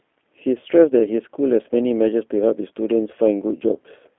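G.729 codec coding runs from start to end of the speech, and the damage is plainly audible. The codec rebuilds each 10 ms frame from a vocal tract filter, a pitch predictor and a handful of pulses, so voices come out rough and slightly synthetic, which fits the G.729A variant at 8 kbit/s. The telephone band limits it to about 250 Hz to 3.4 kHz, with nothing above 3.5 kHz, leaving the sound thin and muffled.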